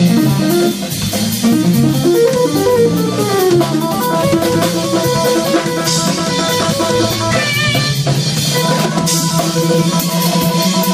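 Nothing stands out here at all, so there's no fault worth pointing to anywhere in the audio.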